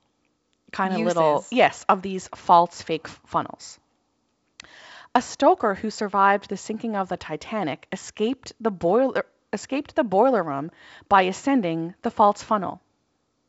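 No technical faults can be heard anywhere in this speech. The G.722 wideband telephone coding at 64 kbit/s is working normally: the audio reaches up to about 7.7 kHz with nothing above it, and any coding damage is faint at most.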